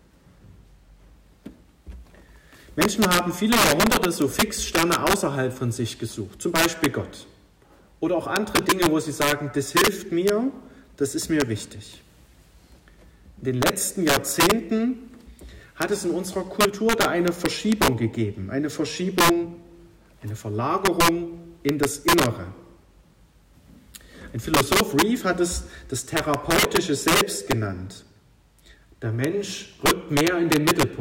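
Integer overflow runs through the whole clip: with the gain pushed about 10 dB too hot, the roughly 1.5 percent of loudest samples wrap to the opposite sign, giving harsh, violent cracks.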